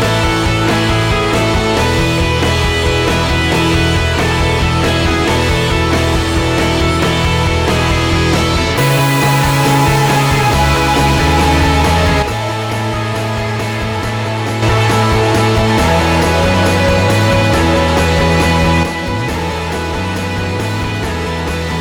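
The audio drops abruptly by about 6 dB from 12.22 to 14.62 s, and again from 18.83 s to the end, with anything unique to one side vanishing. This is most likely one channel dropping out, so the mono sum loses half of the shared signal.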